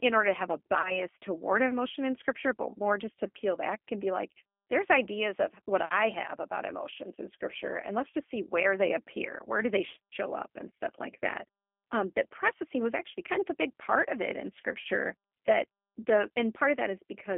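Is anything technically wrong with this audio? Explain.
Yes. The whole clip is speech that sounds slightly rough and synthetic, confined to a narrow telephone band of roughly 250 Hz to 3.4 kHz. This is the G.729 codec at 8 kbit/s: it rebuilds each 10 ms frame from a vocal tract filter, a pitch predictor and a few pulses, and it discards everything above 4 kHz.

At 0.81 to 1.01 s, 8.10 to 8.15 s and 14.81 to 14.85 s the sound briefly smears into a buzzy tone or coloured noise that fades before it recovers. This is VoIP packet loss concealed by the speech codec. Each time about 30 ms of audio went missing, which fits a single lost packet. The decoder extended the last pitch and filter at falling gain, and because each frame builds on the previous one, the distortion at 0.81 s persists for about 0.2 s.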